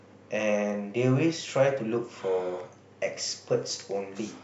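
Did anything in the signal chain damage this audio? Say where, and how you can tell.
Yes. The likely cause is two converters running on unsynchronised clocks with a drift of around 100 ppm, so each time the mismatch builds to a whole sample, one sample is dropped or repeated. In this speech clip that produces clock slip clicks: faint, evenly spaced ticks roughly every 0.3 s from 0.20 s to 4.41 s, about twenty in all. The steady spacing points to a fixed clock error rather than random dropouts.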